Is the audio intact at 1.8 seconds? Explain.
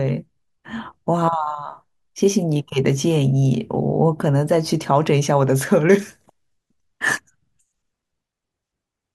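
Yes, the speech at 1.8 seconds plays through intact, with no dropout, click, distortion or other fault at that point.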